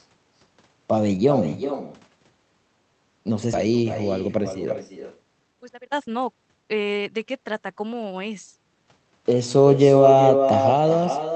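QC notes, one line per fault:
Throughout: echo with no canceller. A quieter, thinner copy of the speech trails it by roughly 0.4 s, sitting about 6 dB below the direct sound. The far end's loudspeaker feeds its microphone, and nothing subtracts that pickup before it returns across the network.
3.53–3.55 s: skip ahead. Playback jumps forward with no gap filled, losing on the order of one and a half seconds of speech. A stretch of audio was dropped while later audio was already waiting, so the two sides of the cut butt together almost directly.
3.65–3.87 s and 4.27–7.25 s: jitter buffer speed-up. The speech runs hurried at an unchanged pitch, about 112% speed in the first stretch and 123% in the second. The buffer trims pitch-period-sized slices repeatedly, removing roughly 40 ms and then 0.7 s, to shed excess delay.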